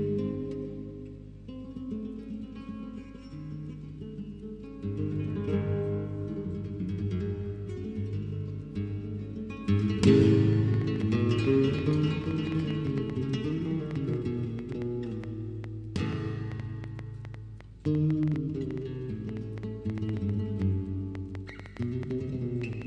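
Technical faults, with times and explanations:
10.53 to 22.83 s, train of clicks: a run of roughly 70 similar clicks at around 5.4 per second, unevenly spaced, popping out about 5 dB above the sound and ticking through pauses too, likely from interference or a faulty connection or power supply.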